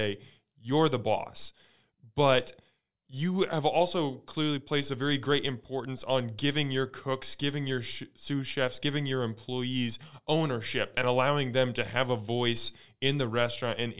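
No technical faults are audible.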